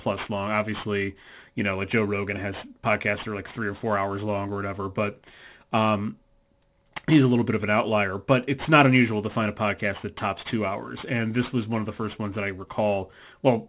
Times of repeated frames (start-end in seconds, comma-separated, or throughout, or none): none